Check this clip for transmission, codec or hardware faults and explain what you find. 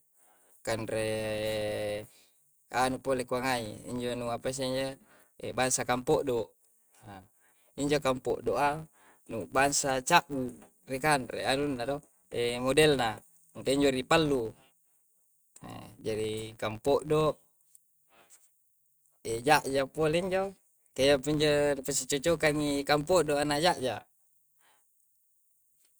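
One fault runs through the whole speech recording: a filter restarted on every block. A filter is losing its state at each block boundary and starting again from silence. The resulting transient repeats at 86.1 Hz, which fits a 512-sample block. It is heard as a steady buzz that rises and falls with the speech level.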